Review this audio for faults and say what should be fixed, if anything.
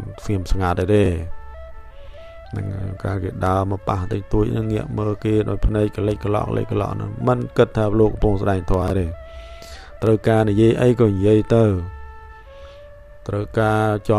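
Chunks out of order at 1.04 to 1.08 s and 8.82 to 8.90 s: a 20 ms chunk plays after ones that should follow it, about one slot late first, then about three. That gives a brief jumbled stutter at the hard joins.

Reorder chunks by sequence number or timestamp before writing or playback, and hold a small jitter buffer so late arrivals slot into place.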